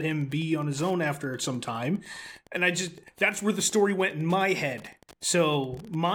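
Wi-Fi interference runs throughout: a radio beacon rectified every 102.4 ms ticks about 30 dB below the speech, showing as evenly spaced vertical spectrogram lines.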